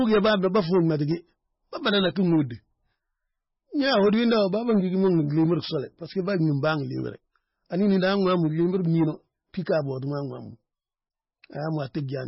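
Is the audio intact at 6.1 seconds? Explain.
No. At 6.1 seconds, as across the whole clip, the speech carries heavy MP3 compression damage, likely from encoding at a very low bitrate near 16 kbps. Nothing survives above 5.6 kHz, and sparse, flickering frequency lines make it sound dull, watery and swirly.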